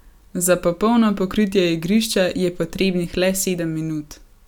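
A short speech recording, with nothing technically wrong audible anywhere in it. No fault turns up at any point, so there are no times or causes to give.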